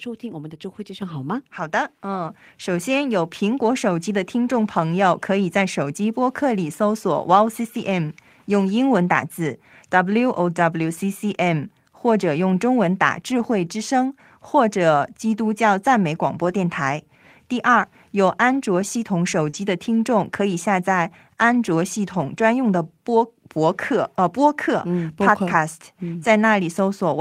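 At 1.02 s the whole sound, voice and background together, jumps up by about 8 dB, and at 2.25 s it rises again by about 4 dB. Both are sudden single steps, not gradual swells. This is the microphone volume stepped up: the call software judged the input too quiet and raised the device's gain at once, so everything picked up afterward arrives louder.

Brief patches of roughness follow at 4.65 s, 8.59 to 8.61 s, 13.39 to 13.41 s, 16.33 to 16.47 s, 19.53 to 19.55 s and 22.09 to 22.39 s. Each is grainy and noisier than the surrounding speech but has no gap. These are lost packets rebuilt from error correction. The first three and the one at 19.53 s each replace 20 ms of audio, the one at 16.33 s about 80 ms, and the longest at 22.09 s about 160 ms. The following packets carried coarse, low-bitrate copies, which the decoder played in place of the missing audio.

Just before that, from 19.49 to 19.55 s, there is a short smear where the sound is stretched rather than heard cleanly. 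This is a short concealed packet loss. About 40 ms never reached the decoder in time, so the receiver extended the preceding sound to bridge the hole and then blended back into the real signal. Its last 20 ms overlaps the rebuilt packet at 19.53 s.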